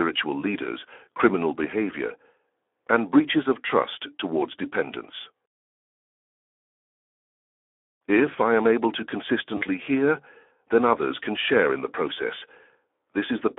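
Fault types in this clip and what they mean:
Speex codec: A CELP speech codec running at about 11 kbps, which leaves the excitation short of bits, so the speech throughout comes out noisy and hoarse, with plainly audible coding damage. The audio also sits inside a telephone band of 300 Hz to 3.4 kHz, so there is nothing in the upper band and the low end is thin. The coarse excitation shows as a rough, grainy texture throughout.
VoIP packet loss concealed by the speech codec: At 9.57 to 9.64 s, between "I am able to" and "hear then others can", about 40 ms of audio goes missing, consistent with two lost 20 ms frames. The decoder fills the gap by extending its last pitch and spectral envelope while lowering the gain, so the speech smears into a brief, fading sound. Because each decoded frame depends on the previous one, the sound stays weakened and distorted just after the gap.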